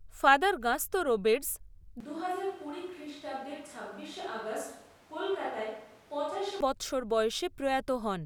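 At 2.0 s the speech turns suddenly roomy and hollow, with thinner bass. It drops roughly 5 dB, and room noise rises to about 25 dB below the voice. This is likely a switch to a distant microphone. The close sound snaps back at 6.6 s.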